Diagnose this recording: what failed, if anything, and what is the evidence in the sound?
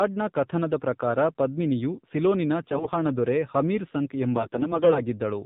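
The speech is dull and band-limited throughout, with nothing above 4 kHz, and it has a buzzy, synthetic edge. That places the failure at the codec stage: the AMR narrowband mobile codec sampled the audio at 8 kHz and rebuilt the voice from a vocal-tract model driven by sparse pulses. The damage is plainly audible, which fits a low AMR-NB mode around 7.4 kbps, where too few bits remain to carry natural texture.

Two stretches turn suddenly hoarse and gargly while pitch and level stay roughly intact: 2.62 to 2.90 s, and a longer run from 4.36 to 5.01 s. These are AMR bit errors at the network stage. A weak radio link flipped the lightly protected bits in each frame, at a rate that sounds like several percent. The checksum on the core bits still passed, so the decoder accepted the frames. It then placed excitation pulses in the wrong positions and used corrupted fine gain and spectral values.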